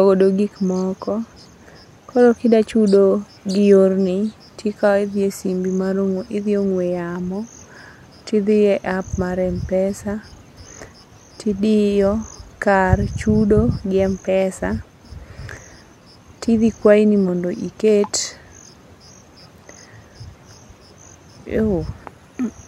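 No technical faults are audible.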